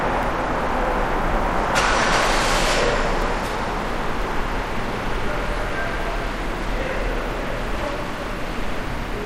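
From 0.23 s to about 4.2 s the audio has periodic USB or driver dropouts: a background task stalls the USB link or audio driver once every 1.0 s, and about five times a sliver of signal, roughly a millisecond, is lost and replaced by silence. Each gap is heard as a tick wherever there is signal. The strict one-second spacing sets it apart from random clicks caused by irregular buffer underruns or digital transmission errors.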